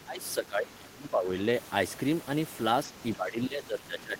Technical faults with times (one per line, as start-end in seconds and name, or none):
0.00-1.29 speech suppressed in double talk
3.16-4.20 speech suppressed in double talk